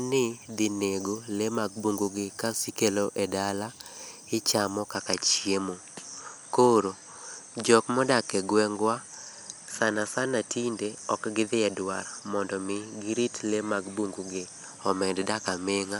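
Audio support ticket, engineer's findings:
From 4.95 s to end: speech duller, top band gone, likely input switched to a poorer device. Spectrogram shows hard ceiling at 11.4 kHz, faint new noise floor; no gap, level unchanged.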